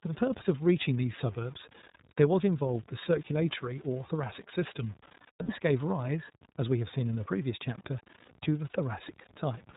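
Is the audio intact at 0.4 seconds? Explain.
No. At 0.4 s, as throughout the clip, the speech has a grainy, gritty edge that moves with the sound. This is likely low bit depth without dither: truncation to what sounds like about 7 bits, leaving error roughly 25 dB below the signal. The speech also sounds muffled, slightly rough and synthetic, with nothing above 4 kHz. That is the iLBC codec, coding each 30 ms frame independently in what fits its 13.33 kbps mode.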